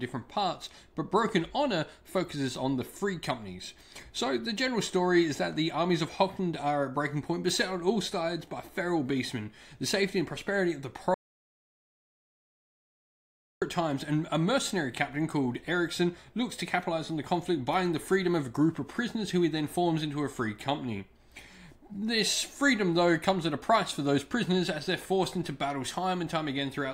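At 11.14 s the audio drops out to dead silence until 13.62 s, about 2.5 s lost. An audio dropout to silence, likely from a lost input link.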